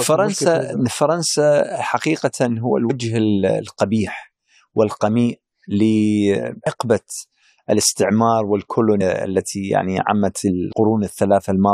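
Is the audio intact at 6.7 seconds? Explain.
No. At 6.65 s the speech is broken by a brief glitch lasting about 12 milliseconds. This is damaged data in a compressed stream: a short stretch of the encoded bytes there is corrupt, so the decoder misreads or discards the affected frame, loses its place in the stream and hunts for the next valid frame header.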